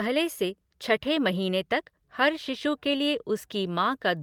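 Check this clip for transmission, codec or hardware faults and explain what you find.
Listening through the speech, nothing stood out as a fault of any kind.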